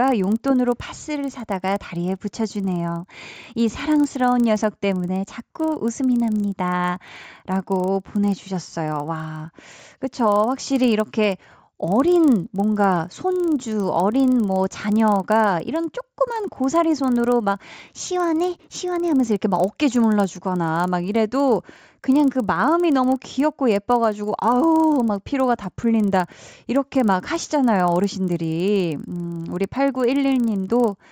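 Throughout the speech, a resampler restarted on every block produces a steady ticking at 25 Hz, one tick every 40 ms, heard only while speech is present. Each block of the 16 to 48 kHz conversion was converted in isolation, so every block boundary carries a small discontinuity.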